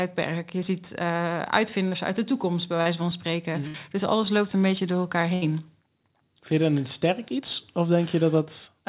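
Short concealed packet loss at 1.88 to 1.93 s and 2.81 to 2.87 s: about 40 ms of speech never arrived, so the receiver extended the preceding sound, leaving a brief smear where a consonant can vanish. A burst of packet loss at 3.67 to 3.76 s and 5.34 to 5.44 s drops 60 and 80 ms. The last sound is held as a fading buzz or hiss before speech resumes further on, all within call audio whose band stops at 4 kHz.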